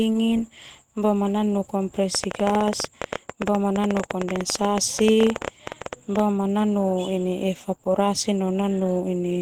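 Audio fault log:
throughout: Opus compression, likely in hybrid speech mode at around 16 kbps; speech sounds hoarse and grainy rather than swirling like MP3, with full bandwidth kept.
2.15–6.20 s: train of clicks, around fifty similar pulses at about 13 per second, unevenly spaced, some 15 dB above the speech and ticking through pauses, likely from interference.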